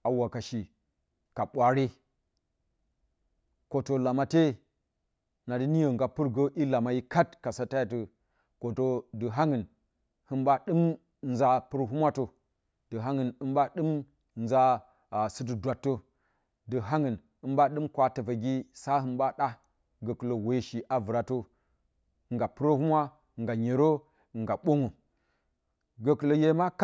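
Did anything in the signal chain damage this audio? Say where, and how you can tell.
No, nothing in the chain audibly damaged this speech recording, and there is no point in it that shows harm from wiring, conversion, buffering, processing, transport, storage or playback.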